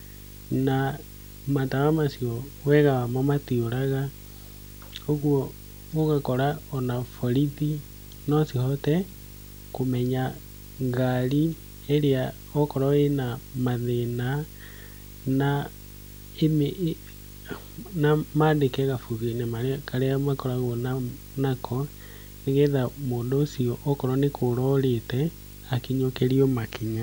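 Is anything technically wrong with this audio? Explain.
Yes. The speech carries video or display buzz from start to finish. A screen or video cable is coupling into the audio path. The result is a buzz at 50 Hz, the picture's field rate, with a gritty hash riding above it. A thin, very high tone sits at 15.6 kHz, the line rate. The interference stays roughly 20 dB below the speech.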